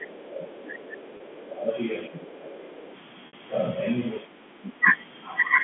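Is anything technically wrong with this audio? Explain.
Yes, three kinds of fault are audible.

Speech suppressed in double talk occurs from 0.0 to 1.73 s, 2.07 to 2.92 s and 4.23 to 4.85 s. While both ends talk at once, the echo canceller likely can't separate the near talker from loudspeaker echo and attenuates everything. The voice dips by around 15 dB in the first stretch and about 10 dB in the later two. On a waveform the envelope sags in uneven patches, and a spectrogram shows the upper harmonics thinning during those spans.

The other side's voice leaking through appears at 0.03 to 0.24 s, 0.64 to 1.47 s, 2.34 to 2.38 s and 2.88 to 2.96 s. Residual echo from the far end, likely played on the talker's loudspeaker and picked up by the microphone, survives the canceller. It sits roughly 25 to 30 dB below the main voice as a faint second voice. On a spectrogram it shows as weak, independent harmonic traces between or beneath the main speech bands.

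Packet loss with pitch repetition occurs twice: 30 ms missing at 1.17 s, which fits a single lost packet, and 60 ms at 3.27 to 3.33 s, which points to two. The receiver fills each gap by repeating the last pitch cycle while fading it. The shorter gap gives a brief held, buzzy tone; the longer one fades into silence before the speech returns with a short cross-fade. A spectrogram shows frozen, evenly spaced horizontal harmonics, and the waveform shows identical repeating cycles that decay before the speech resumes.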